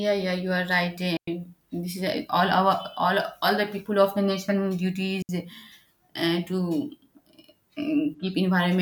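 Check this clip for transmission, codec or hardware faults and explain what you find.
Two digital wireless dropouts break up the speech. At 1.17 to 1.28 s, between "yeah you are right" and "this is eh all", and again at 5.22 to 5.29 s, the wireless link lost too much data and the receiver muted quickly, leaving clean near-silent holes of about 106 ms and 70 ms with no noise bursts around them.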